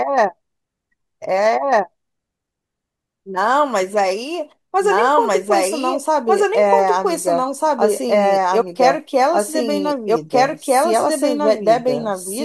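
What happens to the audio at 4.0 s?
At 4.0 s the speech is heard twice at once: the live sound runs over a second copy of itself that trails by about a second and a half, at roughly the same loudness. The copy is full-band and dry, with no decay or room colour, so it reads as a second layer rather than an echo. The doubled audio track runs throughout the clip, likely because the same signal was captured again through a slower path.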